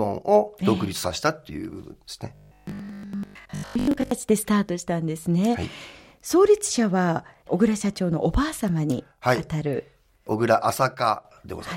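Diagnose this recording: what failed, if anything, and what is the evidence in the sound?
Robotic sound from repeated short buffers, 2.35 to 4.17 s: a rigid 50 Hz buzz, likely a starved driver buffer looping 20 ms blocks. Codec warble would wander in pitch.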